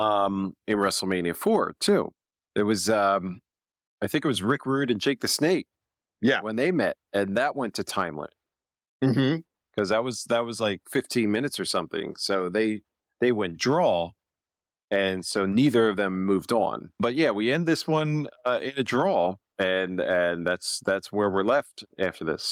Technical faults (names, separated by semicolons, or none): none